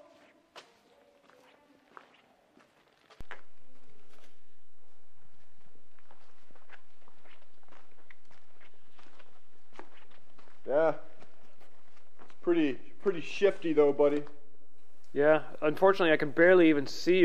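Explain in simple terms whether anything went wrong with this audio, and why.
At 3.21 seconds the audio's resting zero level suddenly shifts, a fault called a DC step. It is the kind of jump that happens when a converter recalibrates itself or when an input carrying a small electrical offset gets switched into the signal path. Here the shifted level stays in place right through to the end. You hear it as a single low thump or click at that moment, while the sound itself carries on unchanged.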